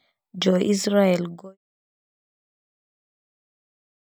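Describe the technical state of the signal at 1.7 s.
At 1.7 s the signal is intact, with no dropout, click, distortion or other fault to be heard.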